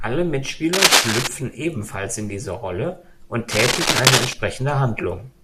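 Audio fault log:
0.73–1.28 s and 3.51–4.33 s, cable scratch noise: two stretches of harsh scratching and rustling sit over the speech, the first ending just before "ebenfalls in diese", the second lasting just over 0.8 s. The bursts run a few dB above the speech, likely from a worn cable or connector being moved so its contact resistance jumps rapidly. On the waveform they show as dense, jagged, irregular spikes. On a spectrogram they form broadband, speckled vertical smears.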